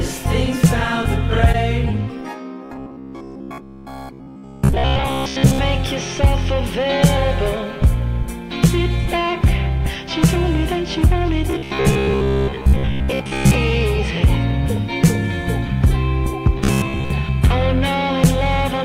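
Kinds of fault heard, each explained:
Robotic sound from repeated short buffers: three stretches become a rigid, metallic buzz at 66.8 Hz, likely because fresh audio arrived late and slices of about 15 ms were looped. Unlike a dropout or stutter, the sound never stops, but most of the original is skipped.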